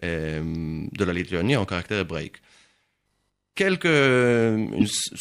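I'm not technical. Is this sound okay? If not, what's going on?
No. Near the end, from about 4.80 to 4.83 seconds, the speech briefly garbles and skips forward. This is likely a broken MP3 bit reservoir. MP3 files store some of each piece's data in the piece before it. When a piece goes missing, the next one reads the wrong data. Unlike an ordinary dropout, which is just a gap, the sound jumps ahead, and the blip lasts about one MP3 frame (roughly 26 ms).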